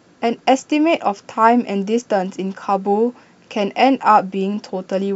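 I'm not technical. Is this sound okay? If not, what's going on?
Yes, this one's fine: there's nothing wrong with the sound here, so you don't need to worry about it.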